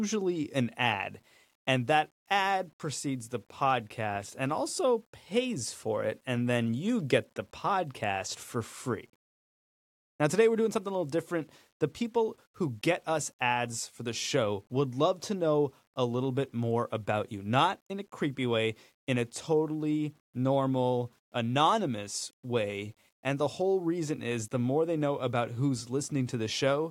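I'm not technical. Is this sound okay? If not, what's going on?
No. Low bit depth without dither runs through the whole speech clip, from start to finish. The speech has a grainy, rough edge that shifts as the voice moves, and it turns grittiest in the quietest moments and the fading ends of sounds, where it can sputter. The likely cause is that the audio was stored with too few steps of loudness, about 9 bits' worth, and rounded to the nearest step without the faint smoothing noise that would hide it.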